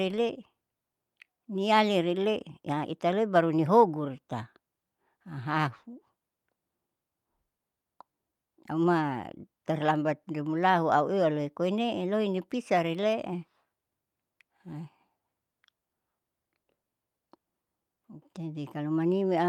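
Nothing in this bit of speech stands out as a technical fault; there's no moment where something audibly goes wrong.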